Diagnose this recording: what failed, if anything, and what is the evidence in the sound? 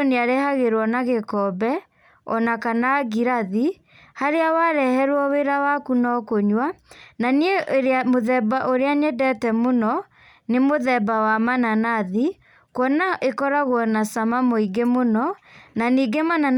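Nothing in this speech recording points to a failure at any stage of the chain. No event or artefact in the sound calls for a diagnosis.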